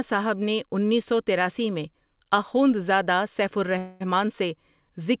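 A speech clip carried over a call path, with a G.711 A-law codec that cuts everything above 4 kHz. Right after "تراسی میں آخوندزادہ سیف", from 3.78 to 4.02 s, there is a call audio freeze. The last sound is stretched into a fading buzz or hiss for about 222 ms. The likely cause is delayed packets draining the jitter buffer. The speech then resumes where it stopped, with nothing lost, just running late.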